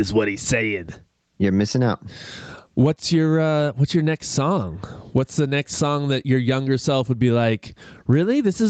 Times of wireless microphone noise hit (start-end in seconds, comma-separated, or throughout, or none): none